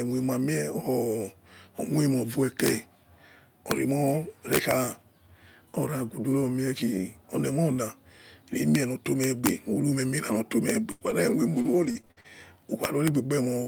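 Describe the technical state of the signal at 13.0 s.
At 13.0 s the speech is inside a burst of integer overflow running from 12.84 to 13.08 s. The level is pushed about 2 dB past the integer limit. Instead of being held at full scale, each peak that exceeds it wraps around to the opposite extreme of the range. Every such peak becomes a full-scale jump in sign, heard as harsh, violent cracks on the loudest moments, far sharper and more abrupt than ordinary clipping.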